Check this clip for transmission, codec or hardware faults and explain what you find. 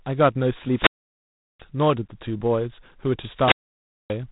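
There's one fault, and it runs the whole way through: G.726 ADPCM coding. It codes each sample as a small difference from a running prediction, and the coarse steps here, which fit the 24 kbit/s mode, leave a harsh, rasping hiss riding on the speech and rising and falling with its level. Nothing gets through above 3.8 kHz, so it sounds narrow and phone-like.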